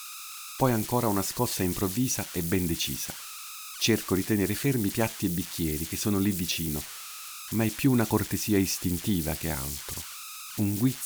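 Speech runs throughout with converter idle tones: an undithered delta-sigma converter locks into repeating bit patterns at low levels, leaving a whistle around 1.5 kHz in pauses and grainy noise under quiet passages, only about 10 dB below the signal. A spectrogram shows a thin horizontal line near 1.5 kHz across the clip, while the waveform's pauses never settle to a flat line.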